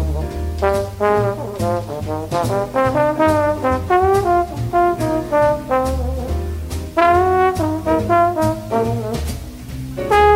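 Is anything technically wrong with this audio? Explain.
No, nothing technically wrong stood out on listening to this audio.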